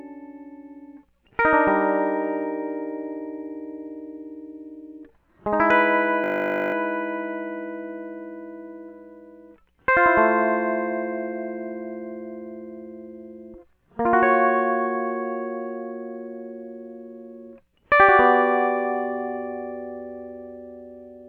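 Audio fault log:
6.24–6.74 s, system hang loop: a frozen 20 ms buffer replays 25 times, giving a steady 50 Hz buzz. The waveform shows identical repeating cycles, and the spectrogram shows harmonics spaced 50 Hz apart.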